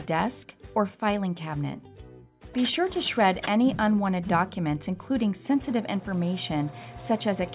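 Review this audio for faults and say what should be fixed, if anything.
Nothing needs to be fixed, as this review finds no faults in the audio.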